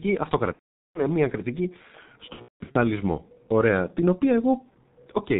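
Speech coded with G.723.1 at a bitrate that sounds like about 6.3 kbit/s: heavily muffled and hoarse throughout, nothing above 4 kHz, and consonants smeared rather than clipped or crackly. VoIP packet loss concealed by the speech codec appears from 0.53 to 1.03 s and from 2.33 to 2.76 s, where sound briefly stretches into a fading tone or noise and then drops to silence, and the second gap breaks up in patches.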